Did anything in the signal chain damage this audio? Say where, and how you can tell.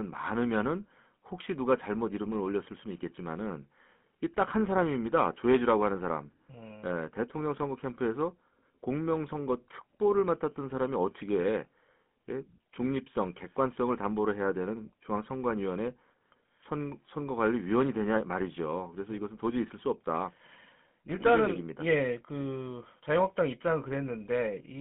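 Yes. GSM full-rate codec damage runs through the whole clip, introduced at the codec stage. The speech sits in a narrow telephone band, roughly 150 Hz to 3.4 kHz, and carries a plainly audible buzzy, gravelly roughness. That comes from the codec rebuilding the voice as a vocal-tract filter driven by coarse, regularly spaced pulses rather than the real excitation, which fits an early 13 kbps GSM voice coder.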